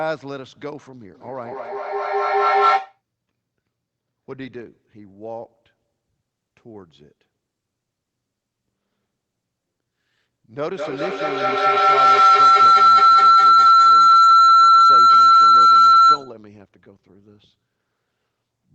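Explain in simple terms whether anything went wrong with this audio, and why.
Feedback echo between two devices, from 1.14 to 3.02 s: two devices in the same room are on the call, and one plays back what the other's microphone picked up. That microphone hears it again, so the sound comes back roughly every fifth of a second, thinner and more ringing each time.

Feedback howl, from 10.61 to 16.39 s: the same loop between the devices now gets louder on each trip instead of fading. The sound narrows to a whistle around 1.5 kHz until the loop is broken.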